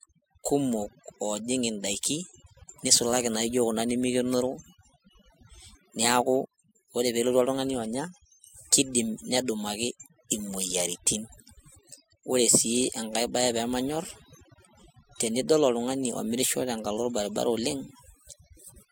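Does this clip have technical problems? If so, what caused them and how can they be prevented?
Yes. Overdone noise removal runs throughout: a noise reducer set too aggressively switches off frequency bands near its noise estimate, so the background collapses into near-silence with twinkling specks, unlike a lowpass filter's steady dullness. Use gentler reduction settings.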